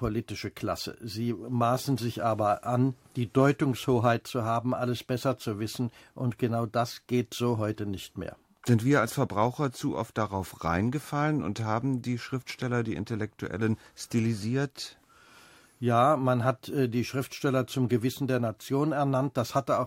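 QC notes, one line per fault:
No technical faults can be heard; the audio signal sounds intact and stable across the whole recording.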